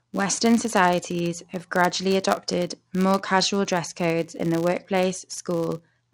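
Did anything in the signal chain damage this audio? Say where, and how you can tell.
Yes: a filter restarted on every block, in a block-based processing stage, puts a 100 Hz buzz across the whole speech clip that rises and falls with the speech level. The rate fits 10 ms blocks, each starting from cleared filter state. A spectrogram shows harmonics spaced 100 Hz apart, and the waveform shows a small transient at every block boundary.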